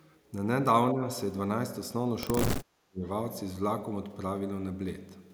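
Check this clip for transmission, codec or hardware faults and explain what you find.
Two dips in the speech point to speech suppressed in double talk. From 0.93 to 1.03 s the level falls by around 10 dB, and from 2.47 to 3.05 s it drops far deeper, close to cut out. An echo canceller likely mistook this talker for loudspeaker echo while both sides spoke, and turned the speech down with it.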